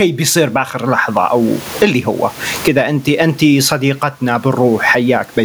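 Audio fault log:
Throughout, gain pumping: the room noise sits about 36 dB below the speech. The gain swings by around 25 dB. Loud and quiet syllables sit close together, so the speech sounds flattened and squashed. The likely cause is an input gain set far too high, with a fast limiter or compressor pulling it down on each loud sound.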